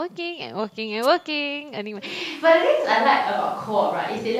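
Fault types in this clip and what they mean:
Wireless microphone noise hit: a brief swish of static from about 1.02 to 1.07 s, as the FM radio link fades and receiver noise surges through. Its hissy, noise-like texture sets it apart from a digital dropout, which leaves silence or a hard click.
Switch to a distant microphone: from about 2.08 s to the end the sound turns roomy and hollow, with thinner bass and background noise roughly 35 dB below the speech, likely because a farther microphone replaced the close one. The abrupt change at one instant, with loudness staying about the same, distinguishes it from gradual movement away from the microphone.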